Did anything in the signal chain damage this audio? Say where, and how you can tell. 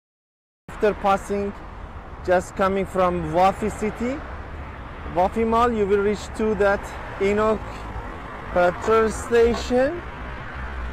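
Yes. This is a cut-off start at the capture or storage stage. The file holds digital silence until 0.69 s, then the sound begins mid-event with no attack or fade. On the waveform that shows as a flat line that jumps straight to the sound's level, and on the spectrogram as a hard vertical edge.

From 7.38 s to the end the pace drops abruptly to about 0.60 times normal while the pitch holds, so this is a time-stretched section. The likely cause is pitch-preserving stretching in processing, which repeats short grains. On the spectrogram, harmonics stay at the same heights but are drawn out, with repeated texture.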